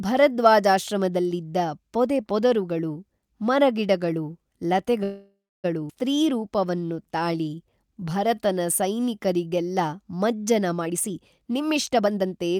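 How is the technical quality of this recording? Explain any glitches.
The recording has four network-related glitches packed into the stretch from about 5 s onward.

Call audio freeze, 5.03 to 5.66 s: the sound stretches into a fading buzz, then about 0.29 s of silence, likely from delayed packets draining the jitter buffer. On a spectrogram, smeared harmonics decay into a blank band.

Skip ahead, 5.88 to 5.91 s: nearly half a second of speech was dropped to recover the delay, so playback jumps forward. The waveform shows an abrupt splice with almost no gap.

Jitter buffer slow-down, 6.16 to 9.69 s: repeated pitch periods add about 0.4 s, so speech plays at 89% speed at the same pitch. On a spectrogram, syllables stretch horizontally while harmonic spacing stays unchanged.

Jitter buffer speed-up, 10.81 to 12.52 s: short pitch-period chunks, about half a second in total, are cut, so speech runs at 128% and sounds hurried. 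On a spectrogram, syllables look compressed in time while pitch stays unchanged.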